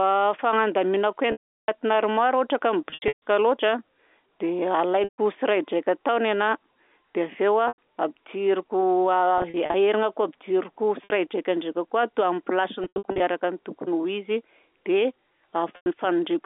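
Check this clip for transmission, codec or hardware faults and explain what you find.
The speech has packet loss with pitch repetition, with eight dropouts at 1.32, 2.9, 5.04, 7.68, 9.38, 11.04, 12.84 and 15.76 s. The receiver fills each gap by looping the last pitch period, so the short ones sound like a brief buzzy hold. The longest, 360 ms just before "armoara ohatra ka", fades to silence before the speech comes back.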